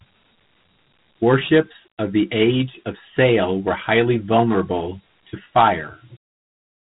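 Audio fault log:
Throughout, Dialogic VOX ADPCM: the speech carries a gritty, grainy hiss that rides along with it and rises and falls with the level, which is what you get when each sample is squeezed into a 4-bit step-size code and the quantisation error tracks the signal. Nothing comes through above about 3.9 kHz, so everything sounds boxed-in and phone-like, which fits an 8 kHz sample rate and a 32 kbps stream. The damage is plainly audible.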